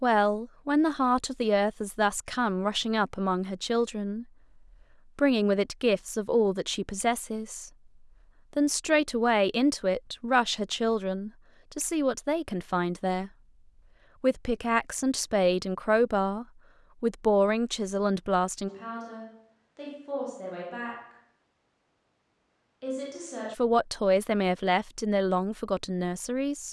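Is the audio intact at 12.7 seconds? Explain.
Yes, at 12.7 seconds the speech is intact, with no dropout, click, distortion or other fault to be heard at that point.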